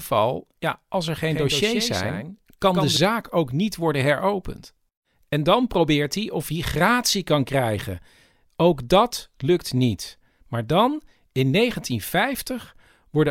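Right after "ja als er", at 1.31 s, the speech picks up a doubled audio track: a second, full-band copy trailing around 150 ms behind and roughly 5 dB quieter, with no decay or room tone, so it reads as a dry slapback rather than an echo. It likely comes from the same signal arriving twice, once via a slower path. It cuts out abruptly at 2.97 s, just before "ook niet worden heropend".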